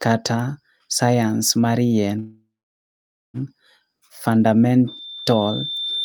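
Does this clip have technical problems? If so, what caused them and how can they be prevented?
Yes. Just after "mar yien", from 2.19 to 3.37 s, the speech stops and the last sound is stretched into a fading buzz. About 0.87 s of that is silence, then the speech resumes where it left off, now about 1.15 s late, with nothing lost. This is likely a call audio freeze, where delayed packets drained the jitter buffer. A spectrogram shows a smeared, decaying copy of the last spectrum fading to a blank band. Using a more stable network connection or a larger adaptive jitter buffer prevents this.

From 4.87 s to the end at 6.05 s, a loudspeaker feedback squeal appears. A single 3.6 kHz tone swells steadily until it sits a few decibels above the speech, because the microphone is picking up the loudspeaker and the loop gain exceeds one at that frequency. A spectrogram shows one bright horizontal line that thickens over time, and the waveform envelope grows. 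Lowering the speaker gain, separating the microphone from the loudspeaker, or using a feedback suppressor prevents it.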